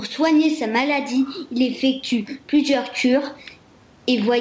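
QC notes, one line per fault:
Throughout, gain pumping: the room noise sits about 42 dB below the speech. Loud and soft passages sit unnaturally close in level, with a swing of around 10 dB, and the sound feels squashed. The likely cause is input gain set far too high, with a fast limiter or compressor pulling it down on each loud sound.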